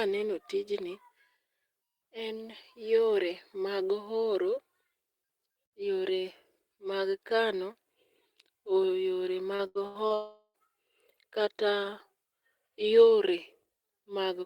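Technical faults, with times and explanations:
9.55–10.13 s, repeated packet loss (robotic sound): four gaps occurred in close succession, the longest gap 80 ms, about 240 ms lost in total. Each hole was patched by extending the preceding sound, so roughly 39% of this stretch is filler, giving choppy speech with pieces missing.
10.14–10.57 s, long network dropout: a stream interruption, likely a network outage, left about 400 ms of speech undelivered. The receiver stretched the last sound into a fading buzz, which thins to a brief silence before speech resumes with that portion gone.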